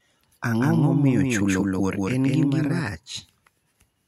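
From 0.60 s to 2.82 s, a doubled audio track appears. A second full-band copy of the speech trails about a fifth of a second behind, at roughly equal level. It lacks any decay or room colour. It starts and stops abruptly, likely from a slower duplicate capture path.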